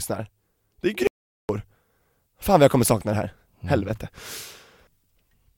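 At 1.07 s the speech cuts off abruptly into dead, total silence with no room tone, then resumes mid-flow at 1.49 s, so about 0.42 s of speech is missing. This is an audio dropout to silence, likely from the input briefly disconnecting or muting while zeros kept being written.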